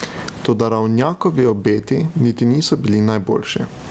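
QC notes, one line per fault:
Throughout, gain pumping: the level swings by around 25 dB, so loud and soft stretches end up squashed close together. The likely cause is mic gain set way too high, with a fast limiter or compressor clamping down on every peak. It all comes through an Opus call path with nothing above 8 kHz.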